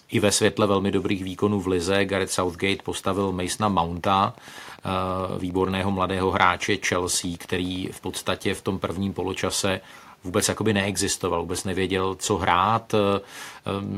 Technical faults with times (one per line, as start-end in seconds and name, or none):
3.95-8.23 Wi-Fi interference